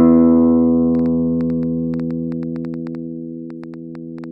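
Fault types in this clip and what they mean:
train of clicks: From 0.95 s to 4.25 s, around twenty similar sharp ticks pop over the audio at an uneven pace, about 6.4 per second, each about as loud as the sound itself. Likely cause: nearby equipment or a faulty connection or power supply injecting repeated pulses.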